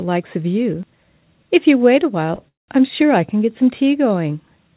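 At 2.35 to 2.40 s there is a short stall from a late packet: the sound holds on its last fragment for about 30 ms with a slight buzz or dip, then resumes where it stopped. Nothing is lost, but everything after runs 30 ms later.

A call audio freeze follows at 2.48 to 2.70 s. The sound trails off as a brief fading buzz or hiss and then drops to silence for 160 ms of the 200 ms filled. It resumes where it left off, with nothing missing, adding a 200 ms gap. The likely cause is packets held up in transit, which emptied the jitter buffer. Throughout, the band stops at 4 kHz, which fits a G.711 A-law call path.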